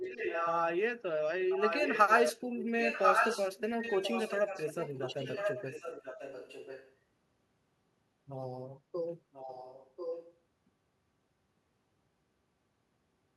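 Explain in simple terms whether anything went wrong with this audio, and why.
Echo leak at 0–0.58, 1.5–2.33, 2.56–6.96 and 9.32–10.37 s: the speech repeats about a second late, likely because a loudspeaker's sound slipped past the echo canceller.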